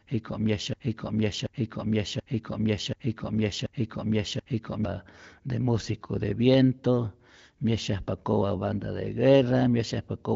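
From the first moment to 4.85 s, a broken-record loop is already under way. A 0.73 s fragment repeats six times, back to back, likely from a stalled stream.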